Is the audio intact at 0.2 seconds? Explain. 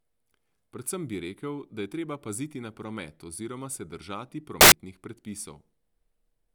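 Yes, the speech at 0.2 seconds is intact, with no dropout, click, distortion or other fault at that moment.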